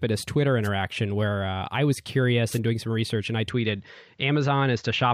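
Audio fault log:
0.63–0.69 s and 2.50–2.59 s: wireless microphone noise hit. Brief swishes of static, about 60 and 90 ms long, as the FM radio link fades and receiver noise rises.
3.50 s to end: input switched to a poorer device. The speech turns duller with nothing above 7.6 kHz, and a new noise floor sits far below it. There is no gap and no level jump, which likely points to a mid-recording input change.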